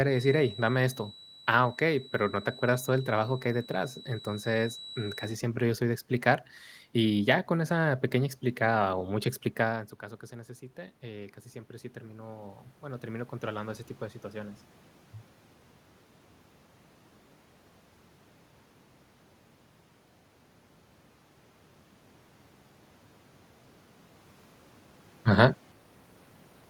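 Until "siempre yo soy de" at 5.4 s, a loudspeaker-to-microphone loop likely held at the edge of feedback leaves a thin, wavering 3.9 kHz feedback whistle about 20 dB down. From 9.7 to 14.66 s, after "pequeña explicada o mucha", the automatic gain rises about 8 dB against an input about 16 dB quieter, swelling voice and room noise together.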